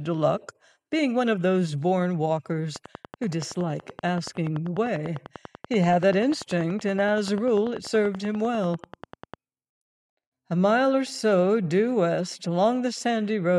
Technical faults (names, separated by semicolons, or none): train of clicks